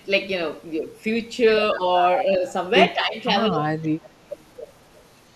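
From 1.76 s the speech keeps ducking: brief dips at 1.76, 2.25 and 2.94 s, then a deep sag of around 25 dB from 3.5 to 4.03 s. That's likely speech suppressed in double talk, the echo canceller turning down the near talker while the far side spoke too. Between and after those dips, at 3.19, 4.04, 4.33 and 4.94 s, faint scraps of voice trail the speech by 196 ms, roughly 30 to 40 dB down. That's likely echo leak, loudspeaker sound the canceller didn't fully remove and sent back.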